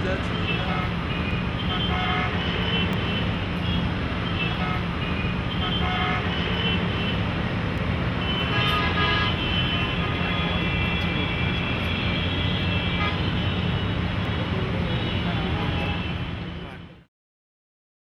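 Clock drift buffer slips run from 1.31 s to 17.48 s, heard as a regular click every 1.62 s, about ten in all. Likely two devices on separate clocks about a thousandth apart, so the buffer periodically drops or repeats a block of around 70 samples.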